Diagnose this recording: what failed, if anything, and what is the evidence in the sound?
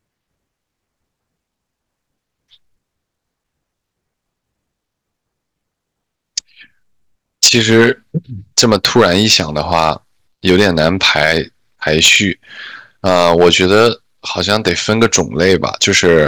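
Hard clipping at a gain or converter stage: harsh fuzz on loud speech at 7.43–7.90, 8.58–9.91, 10.47–11.38, 11.87–12.16, 13.06–13.88 and 14.38–16.27 s. The level overshoots by about 8 to 10 dB, so peaks are cut flat and spray high harmonics.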